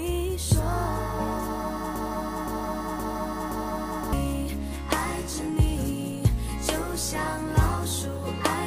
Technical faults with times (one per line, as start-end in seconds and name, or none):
1.96-4.13 broken-record loop